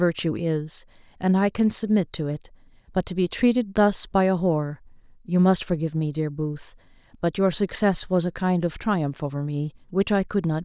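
Nothing technical jumps out in this short bit of recorded speech; there's simply no fault to point to here.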